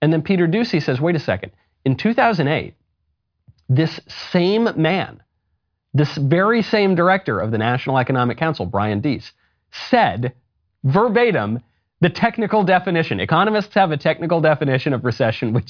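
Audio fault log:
No faults are audible anywhere in this speech recording.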